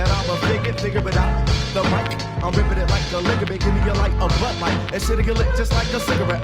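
From 0.42 s to 3.79 s, a call bitrate drop cuts the encoder's bit budget, roughly halving it, consistent with a fall from about 32 to 17 kbps. For about 2.05 s at its lowest, coarser coding makes the sound rough and watery, with dulled high end.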